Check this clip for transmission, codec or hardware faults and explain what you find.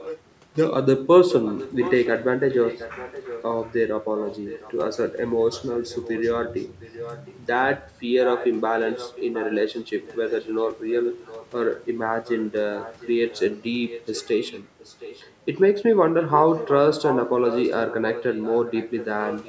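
One fault runs through nearly the whole recording: echo leak. A faint, delayed copy of the speech trails the live speech by about 710 ms at 0.0 to 0.2 s, 1.3 to 4.76 s, 5.51 to 7.4 s, 8.23 to 15.34 s and 16.21 to 19.48 s. It sits roughly 10 to 15 dB below the direct sound and is loudest at the start and end. The likely cause is a far end playing the call over a loudspeaker, where the echo canceller failed to strip the returning audio from its microphone and sent it back. The audio itself stops at about 8 kHz.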